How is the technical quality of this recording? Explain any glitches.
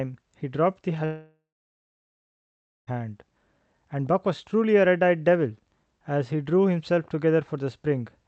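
The recording has one clear glitch: a long break in the speech. From 1.05 s to 2.89 s the sound smears into a fading buzz, then goes silent for about 1.45 s before speech resumes, with that stretch lost. This is likely a long network dropout: the receiver padded the gap, then gave up until packets returned. Throughout, the top end stops near 8 kHz, which fits a call codec on a WebRTC call path.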